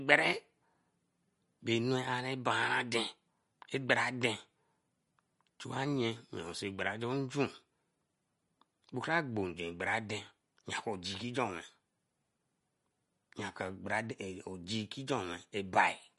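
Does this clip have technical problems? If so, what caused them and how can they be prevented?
Yes. Throughout, the speech sounds plainly watery and swirly, likely from MP3 compression at a low bitrate near 48 kbps. A spectrogram shows a flat ceiling at 11.2 kHz with speckled, flickering gaps below it. Encoding at a higher bitrate, or keeping an uncompressed master, prevents this.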